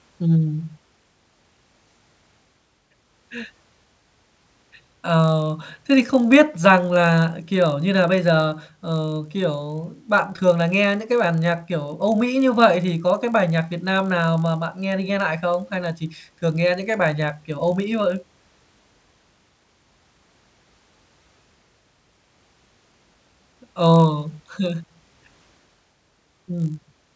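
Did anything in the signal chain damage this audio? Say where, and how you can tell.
Yes. From 3.22 s to the end, the speech carries a rough 50 Hz buzz that rides on the signal and drops out in the pauses. It comes from the sample-rate conversion stage, with the resampler restarted on every block. Each 20 ms block is converted in isolation, likely from 48 kHz down to 16 kHz, so the filter at each block edge sees missing or wrong neighbouring samples. That leaves a small error every 20 ms, heard as the 50 Hz buzz.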